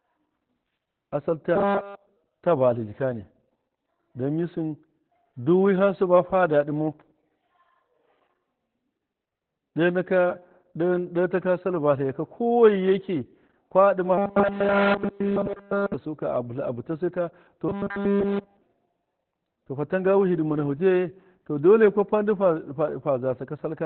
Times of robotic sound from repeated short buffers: 1.56-2.17, 14.18-15.94, 17.69-18.63

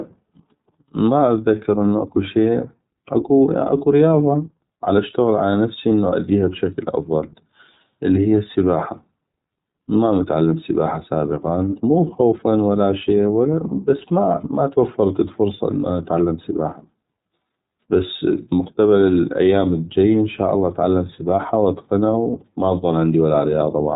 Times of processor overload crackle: none

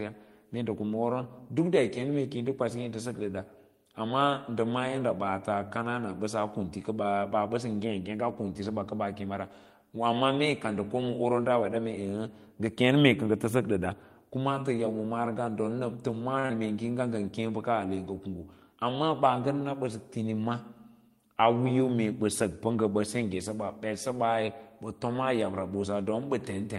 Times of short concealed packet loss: 16.46-16.51

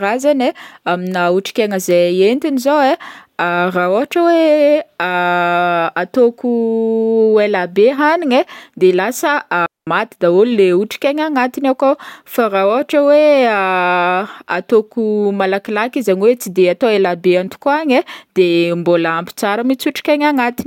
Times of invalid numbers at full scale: none

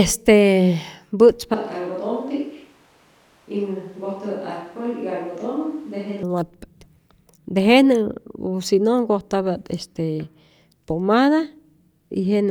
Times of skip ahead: none

